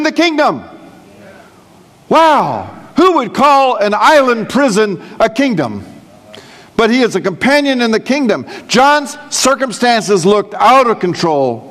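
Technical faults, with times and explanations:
0.40–10.42 s, periodic USB or driver dropouts: every 2.0 s a sliver of audio well under a millisecond is skipped, leaving a regular tick.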